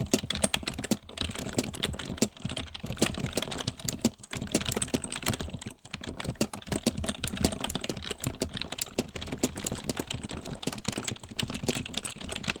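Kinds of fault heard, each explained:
call bitrate drop: from 8.67 s to the end, the encoder has fewer bits after the call's bandwidth estimate fell, consistent with roughly 32 kbps dropping to about 17 kbps. The sound turns rough and watery, and a spectrogram shows coarser, smeared detail with thinned upper frequencies.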